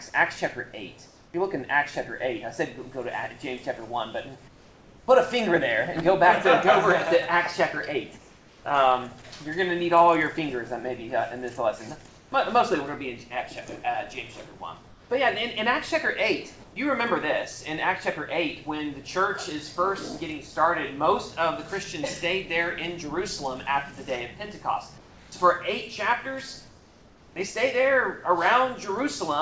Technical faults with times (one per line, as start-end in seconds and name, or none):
1.06-1.34 comfort noise in place of the background
4.48-5.08 comfort noise in place of the background
8.18-8.64 comfort noise in place of the background
12.08-12.32 comfort noise in place of the background
14.88-15.10 comfort noise in place of the background
24.98-25.32 comfort noise in place of the background
26.68-27.36 comfort noise in place of the background